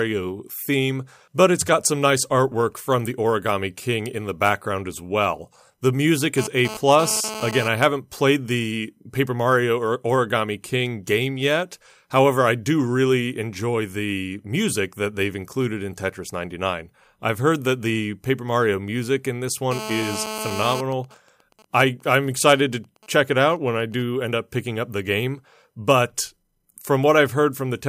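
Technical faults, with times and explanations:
6.38–7.68 s and 19.71–20.80 s, GSM phone buzz: a nearby 2G phone's 217 Hz transmit bursts are rectified into a harsh, raspy buzz. It is intermittent at about 10 dB below the speech during data transfer, then steady at about 8 dB below during a call. A spectrogram shows a comb of harmonics spaced 217 Hz apart, and the waveform shows a regular pulse train.
20.80–24.03 s, GSM signalling bursts: the phone stays in the call while its user is silent and sends only short groups of bursts. These become even ticks with a longer 217 Hz buzz twice a second, roughly 25 dB below the speech, seen as intermittent vertical stripes and short harmonic blocks.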